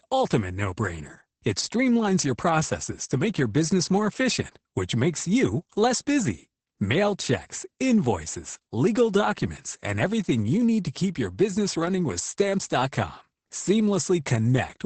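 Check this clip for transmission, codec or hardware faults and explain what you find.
Opus voice compression runs throughout the speech. Nothing is heard above about 8.7 kHz. That fits the wideband SILK mode, which models speech by linear prediction. The damage is heavy, which fits a low rate near 10 kbps. At that rate the coder describes the excitation coarsely in each short frame. The voice sounds muffled and hoarse, with a slightly robotic buzz.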